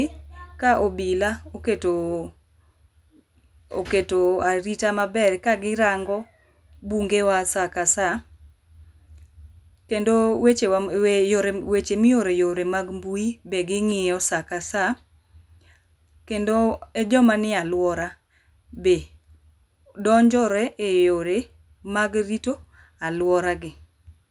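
Throughout, the resampler restarted on every block. Each 250 ms block was converted from 24 kHz to 48 kHz alone. Its edges tick at 4 Hz under the speech.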